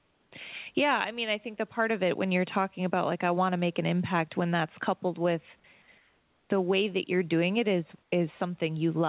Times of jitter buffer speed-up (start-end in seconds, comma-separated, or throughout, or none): none